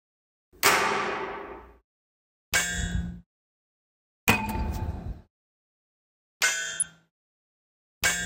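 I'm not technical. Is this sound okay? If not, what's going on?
No. Around 6.80 to 6.85 seconds there is DAB burbling. Weak digital radio reception let a few data errors slip past the error correction, so some frequency bands get short blips of noise, causing a few brief, watery blips over the sound.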